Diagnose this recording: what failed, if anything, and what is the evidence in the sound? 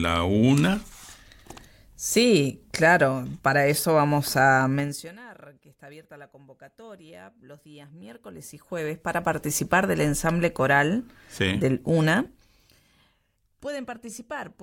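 Zipper noise in the buffer-level gain processing. Level moves at 4.76–5.16 s, 7.96–9.4 s and 12.2–12.8 s carry a ticking of about 30 clicks per second. Gain jumps in unsmoothed 1–2 dB steps, each leaving a small discontinuity.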